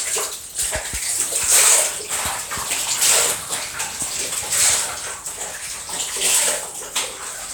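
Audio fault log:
No faults heard.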